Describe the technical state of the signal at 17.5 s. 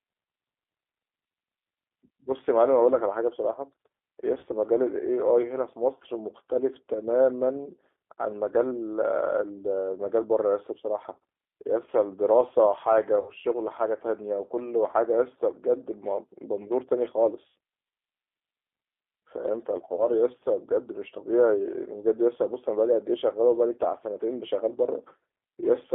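At 17.48 to 17.54 s there is VoIP packet loss concealed by the speech codec. About 80 ms of audio went missing, which fits a run of roughly four 20 ms packets. The decoder filled the hole by repeating its last pitch and filter settings at falling gain, so the sound smears into a brief buzzy tone or coloured noise that fades. On a spectrogram this shows as frozen spectral content that dims across the gap. The waveform shows a shrinking envelope, and the level stays weak for a short stretch after 17.54 s while the decoder recovers.

Underneath, the whole signal is G.729 (the G.729A variant) at 8 kbit/s. This codec rebuilds speech from a filter model and a few pulses per frame, so it sounds plainly rough and synthetic. The line band runs from about 250 Hz to 3.5 kHz. A spectrogram shows a hard ceiling near 3.5 kHz with nothing above it, a thin low end, and a grainy, smeared texture in the harmonics rather than clean lines.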